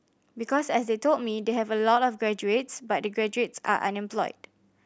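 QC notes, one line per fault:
No fault to note in the speech.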